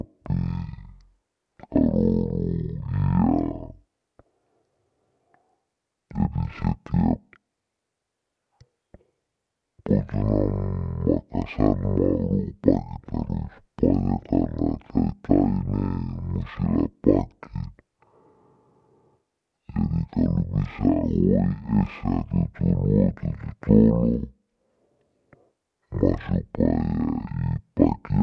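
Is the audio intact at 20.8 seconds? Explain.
No. At 20.8 seconds, as throughout the clip, the speech has a wrong sample rate fault. It runs at half speed and an octave low, 12 semitones down, which fits 44.1 kHz material being played at about 22 kHz with no conversion. Voices sound deep and drawn out. Unlike a pitch shift or a time-stretch, which change only one property, this fault lowers the pitch and slows the timing together by the same ratio.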